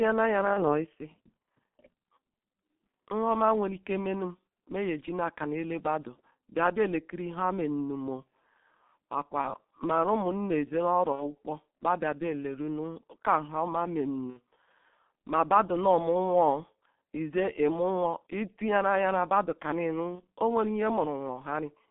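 The whole call runs through a G.723.1 codec, a low-rate setting around 6.3 kbit/s confined to roughly 150 Hz–3.5 kHz, so the speech is muffled and hoarse with smeared consonants. VoIP packet loss concealed by the speech codec hits at 0.53–0.86 s, 9.41–9.54 s, 11.12–11.31 s, 14.30–14.39 s and 20.15–20.23 s. Each gap, which fits one or two lost 30 ms frames, gets filled with a fading extrapolation of buzzy tone or coloured noise, and the speech stays weak briefly afterwards.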